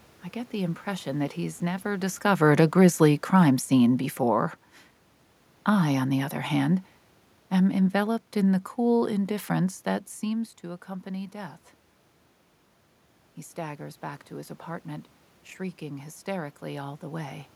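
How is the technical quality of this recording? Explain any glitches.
One glitch stands out in the speech. From 2.24 to 4.53 s, after "impression that he's never", automatic gain falling occurs. The gain control judged the input too loud, or its background noise too strong, and eased it down by about 4 dB. The voice and the room noise sink together. The level shift near 2 s and again around 10 s comes from the talker moving relative to the microphone.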